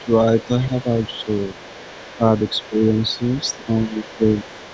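A faint second voice, the other side's voice leaking through, sits well below the speech at 0.00–0.17 s and 0.37–0.49 s, then runs continuously from 0.79 s to the end. It is likely loudspeaker echo the canceller left in the microphone signal.

Speech is suppressed in double talk at 0.68–0.86 s, 2.17–2.21 s, 2.69–2.81 s, 3.57–3.67 s and 3.85–4.24 s. The level dips by a few dB, reaching around 10 dB at 2.69 s and 3.85 s. This is likely the canceller ducking the talker while the echo is present.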